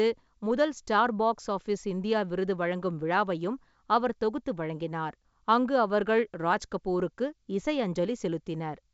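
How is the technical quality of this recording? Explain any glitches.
No glitches turn up anywhere in this speech recording. It carries the character of G.722 wideband telephone coding at 64 kbit/s, with the top end reaching to about 7 kHz and any coding texture in the upper band faint at most.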